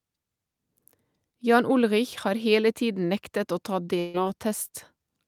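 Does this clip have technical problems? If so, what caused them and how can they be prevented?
Yes. From 3.99 to 4.16 s the speech stops moving forward: the last sound is stretched out and fades for about 140 ms, then the talker resumes slightly further on, with that stretch of speech gone. This is a burst of packet loss. Several consecutive packets never arrived or came too late, so the receiver concealed the gap by repeating and attenuating what it last had, then skipped ahead. A larger jitter buffer, forward error correction or packet redundancy, and a less congested network path would prevent it.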